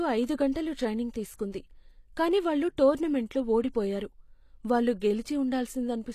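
From start to finish the treble sounds synthetic, with s sounds gritty and lispy and nothing above about 14.9 kHz. The likely cause is HE-AAC compression at a low bitrate, around 24 kbps. The codec rebuilds the upper band by copying lower bands upward, so the harmonics there don't match the real speech.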